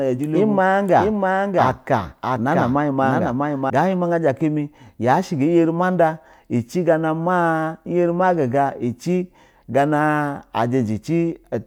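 A second capture path, likely slower than the first, or an edit holding two copies out of step, has mixed the speech in twice, producing a doubled audio track. From the very start until 3.7 s, a full-band copy trails the original by roughly 0.7 s at around 5 dB quieter, with no decay or room colour, then stops abruptly.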